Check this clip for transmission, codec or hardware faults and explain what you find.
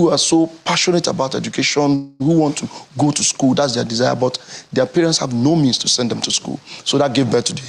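One fault stands out: a call audio freeze from 1.95 to 2.36 s. The sound stalls and the last moment is stretched into a fading buzz or hiss for about 245 ms, after which the audio carries on exactly where it stopped. This is likely packets held up in transit, leaving the jitter buffer empty while the receiver filled the wait. Unlike a dropout, nothing is cut out; the gap is inserted and the timing shifts later.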